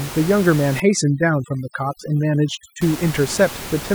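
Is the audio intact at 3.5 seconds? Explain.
Yes, the audio is intact at 3.5 seconds, with only the room's own background noise sitting about 13 dB below the speech, which belongs to the recording rather than to any fault.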